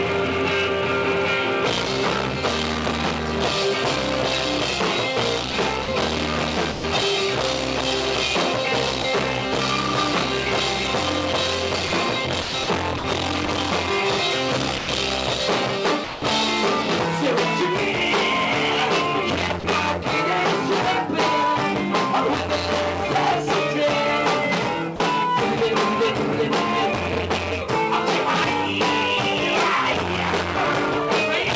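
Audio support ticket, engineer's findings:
Sound chopped by the voice detector, 5.52–5.88 s and 11.88–13.48 s: sender VAD likely toggling transmit on and off. Brief sound segments replaced by comfort noise, so the audio turns choppy.

Sound dropped by the voice detector, 6.72–6.84, 9.02–9.04, 14.78–14.88, 16.04–16.22, 19.60–19.64 and 24.96–25.00 s: low-level sound likely misread as background, so transmission stops. Gaps of 20–180 ms filled with steady comfort noise, and the sound resumes when the detector retriggers.

The whole clip is band-limited to 8 kHz, which fits a G.722 call path.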